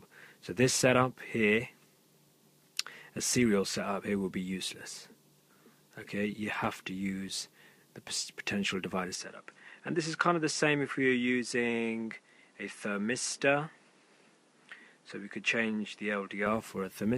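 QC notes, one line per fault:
9.15–16.46 s, input likely switched to a poorer device: with no gap, the sound drops a few decibels, loses everything above 11.2 kHz and gains a new background noise roughly 30 dB down, then returns. The simultaneous noise-floor change separates it from plain filtering.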